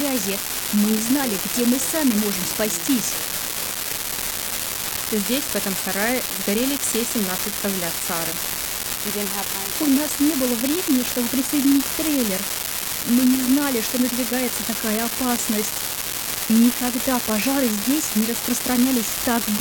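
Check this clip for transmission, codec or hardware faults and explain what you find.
One hardware fault runs through the whole clip: an unreliable data bit. A marginal data line flips one bit at random, adding identical spikes of about -7 dBFS, heard as constant crackle continuing through pauses, visible as broadband speckle and uniform-height needles.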